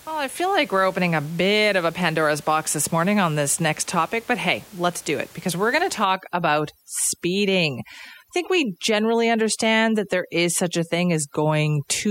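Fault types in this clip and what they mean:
Overdone noise removal: from about 6.04 s to the end, a noise reducer set too strong pulls individual frequency bands down or out wherever they sit near its noise estimate, so the room noise, about 26 dB under the speech, drops and breaks into twinkling, warbling specks.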